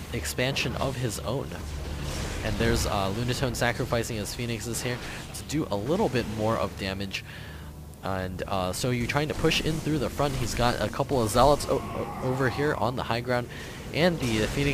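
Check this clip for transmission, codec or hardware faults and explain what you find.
No faults found.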